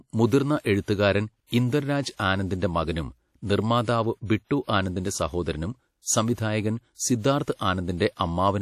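The speech carries plainly audible codec damage from start to finish. Nothing is present above 14.7 kHz. A ringing, washy quality and a hiss that breathes with the signal point to WMA compression, likely at a low rate, which fits about 48 kbps.

Pre-echo appears twice. From 6.02 to 6.06 s, a short hiss of 41 ms smears ahead of a sharp attack. From 7.54 to 7.59 s, the hiss spreads 53 ms. The codec's block noise fills the quiet before each onset, softening it.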